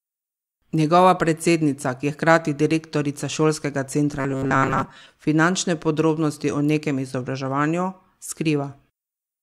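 Robotic sound from repeated short buffers runs from 4.20 to 5.10 s. The speech turns into a rigid, metallic buzz with a fixed pitch of 134 Hz that still loosely tracks the words. That pitch fits a chunk of about 7.5 ms being replayed over and over. The likely cause is fresh audio arriving too seldom, so the last short buffer was looped to fill the gaps while most of the real audio in that stretch, roughly 70 percent, was skipped.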